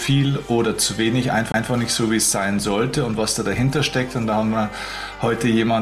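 At 1.52 to 1.54 s there is a CD skip. The laser lost its track and landed on a different turn of the disc's spiral, so playback mutes for roughly 20 ms and then resumes from another point in the sound. It is heard as a brief tick followed by an abrupt discontinuity. On a waveform this is a short flat gap with a hard edge on each side. A spectrogram shows a thin vertical broadband click and a mismatch between the content on either side of the break.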